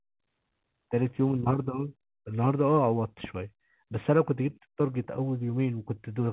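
Nothing here counts as a fault: the speech comes over a call path that sounds like G.711 A-law at 64 kbps, so it's narrowband with nothing above 4 kHz, which is just how that codec behaves.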